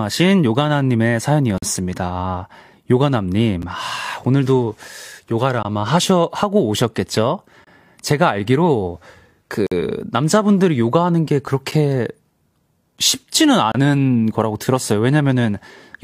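Speech, broken by short hard-edged silences from gaps between stream segments at 1.58–1.63, 3.62, 5.63, 7.64–7.67, 9.67–9.72, 11.71 and 13.72–13.75 s. Adjacent 2-second segments' time stamps don't meet, so the player inserts 8 to 49 ms of silence; nothing is lost.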